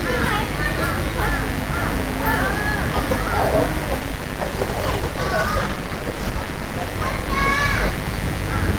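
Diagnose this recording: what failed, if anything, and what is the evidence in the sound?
A mains buzz sits under the whole recording, an analogue wiring fault. Sharp switching spikes at twice 50 Hz spread harmonics into the kilohertz range, roughly 10 dB below the sound. That raspy edge sets it apart from a smooth, pure hum caused by a simple ground loop.

From 4.0 s to the end, a call bitrate drop degrades the codec stage. The sound turns rough, watery and dull, consistent with the encoder falling from about 48 kbps to about 15 kbps, and it stays at its worst for 2.76 s. Unlike packet loss, there are no gaps or glitches.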